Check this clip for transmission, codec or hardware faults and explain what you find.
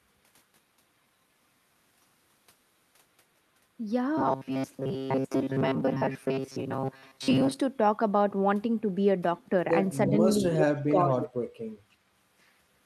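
Three kinds of fault are audible. Each sound is described as heard, with its likely cause.

Robotic sound from repeated short buffers runs from 4.18 to 7.60 s. The speech becomes a stiff, metallic buzz pitched at 134 Hz that still loosely tracks the syllables. The receiver is likely running short of fresh audio and looping its last fragment of about 7.5 ms to fill the gaps, with most of the real signal over this stretch lost. The repetition rate sets the buzz pitch.

Speech suppressed in double talk appears twice. From 10.09 to 10.16 s there is a shallow dip of about 5 dB. From 10.78 to 11.15 s the level falls by up to about 25 dB. The pattern points to an echo canceller that could not tell the near talker from loudspeaker echo while both sides were active, so it attenuated everything.

Echo leak shows as delayed copies of the speech, 358 ms late at 10.59 to 10.63 s and 359 ms late at 11.22 to 11.29 s. 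The first copy is about as loud as the direct speech. The second is about 10 dB lower. The source is a loudspeaker on the far end whose echo canceller let part of the microphone pickup through and sent it back. The nearly identical delay in both cases fits a single fixed round-trip path.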